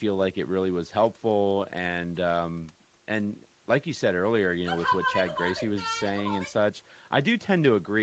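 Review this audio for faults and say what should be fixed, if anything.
No faults; nothing to fix.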